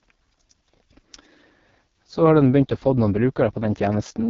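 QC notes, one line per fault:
Throughout: AMR wideband (HD Voice) codec. The speech is rough and raspy, with a buzzy, hoarse texture and nothing above 7.5 kHz. The pulse-driven vocal tract model is starved of bits, and the heavy damage points to AMR-WB's lowest rate, 6.6 kbit/s.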